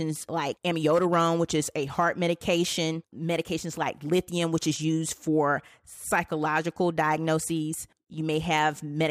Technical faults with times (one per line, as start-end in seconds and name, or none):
none